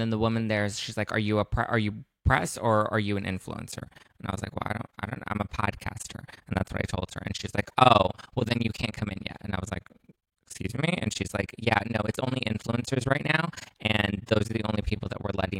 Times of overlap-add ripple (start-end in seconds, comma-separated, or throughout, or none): 3.72-15.59